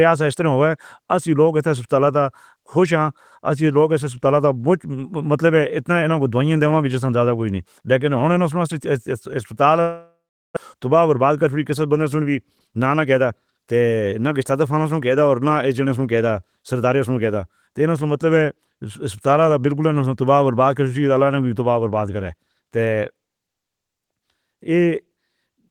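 At 9.81 s the speech breaks up. The last sound is stretched into a fading buzz, then goes quiet for about 380 ms. Normal audio returns at 10.58 s, with about 600 ms of speech simply gone. This is likely a long network dropout. No packets arrived, so the receiver filled the gap with concealment and then silence. The stream resumes later in time, so the lost part is skipped.

Afterwards the receiver is holding extra audio, roughly 150 ms more than before. It works this off with a jitter buffer speed-up. From 11.15 to 11.57 s the speech runs at about 107 percent, losing roughly 40 ms. From 12.53 to 13.32 s it runs at about 110 percent, losing roughly 100 ms. Small pitch-period pieces are cut out repeatedly. Pitch stays the same, but the delivery sounds hurried.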